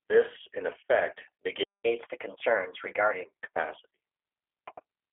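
Throughout, the speech passes through the G.729 codec, rebuilding each frame from a filter, pitch predictor and sparse pulses at a rate that fits 8 kbit/s. Nothing above 3.5 kHz survives, and a rough, synthetic edge is plainly audible. From 1.63 to 1.84 s there is a playback stall: the player likely ran out of data, so the sound cuts off mid-flow for about 0.21 s of silence. From 1.84 to 3.25 s comes catch-up at higher speed, as the player resamples its backlog to 1.15 times normal speed, raising the pitch by roughly two semitones before settling back.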